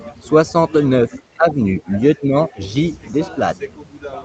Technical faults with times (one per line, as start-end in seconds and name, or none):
1.10-1.90 speech suppressed in double talk
1.13-1.19 other side's voice leaking through
2.17-2.59 speech suppressed in double talk